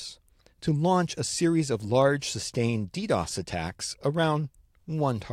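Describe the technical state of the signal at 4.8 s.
At 4.8 s the speech signal is intact, with no technical fault present at that moment.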